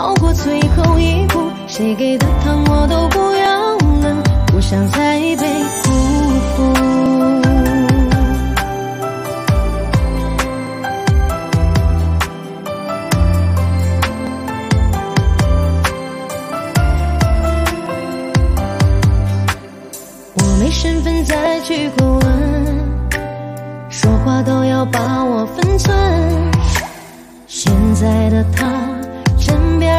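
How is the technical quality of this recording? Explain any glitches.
The recording has one recurring glitch. Clock drift buffer slips: from 3.46 s to 28.65 s, a click repeats every 3.6 s while sound is present. Two clocks likely differ by a few hundred parts per million, so a few dozen samples periodically drop or repeat.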